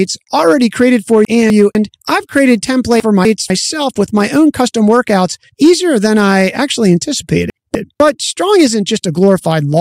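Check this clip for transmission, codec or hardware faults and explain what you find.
Two problems here: mild clipping across the whole speech clip, and three spots where bits of audio play in the wrong order.

Hard clipping runs throughout. The signal is driven about 4 dB past what the chain can pass, so the loudest peaks, around one percent of samples, get sliced flat. Those squared-off tops add high harmonics, which you hear as a light crackle on the louder syllables.

Chunks out of order show up at 1.25 to 1.75 s, 3.0 to 3.5 s and 7.5 to 8.0 s. In each case a 250 ms chunk turns up one slot late, so it plays after the chunk that should follow it. Nothing's missing, but the order is wrong at the hard joins and the speech sounds briefly jumbled.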